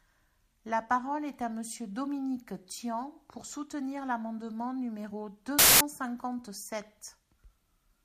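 At 5.59 s the speech gives way to a burst of loud, harsh broadband noise lasting until 5.81 s. These are samples built from the wrong bytes. Each value is assembled misaligned or in swapped order, so the fast-changing low bits dominate and the waveform turns to broadband noise.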